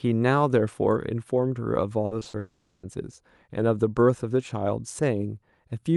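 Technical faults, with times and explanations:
2.05–2.35 s, repeated packet loss (robotic sound): four short holes, the longest about 60 ms, were each patched by stretching the preceding sound, so nearly half of this 0.3 s stretch is filler. The speech turns choppy, with fragments missing.
2.39–2.85 s, long network dropout: for about 440 ms the speech is replaced by a continuation of the last sound that drags on and never falls to silence before normal audio resumes. The cause is likely a lost network stream, with the receiver covering the entire gap.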